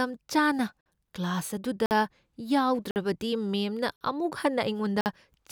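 Gaps between chunks occur at 0.81–0.86, 1.86–1.91, 2.91–2.96, 3.96–4.01 and 5.01–5.06 s. The speech arrives in 1-second chunks, and each join is followed by 50 ms of silence, as if padding were inserted or each chunk started late. Nothing is lost, but the speech halts briefly at every join, producing short holes that recur steadily about every 1.05 s.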